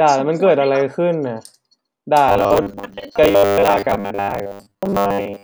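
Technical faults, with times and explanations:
2.29 s to the end (5.44 s), robotic sound from repeated short buffers: the speech becomes a stiff metallic buzz pinned at 100 Hz, still loosely tracking the words. Likely starved playback looping a 10 ms chunk over most of the real audio.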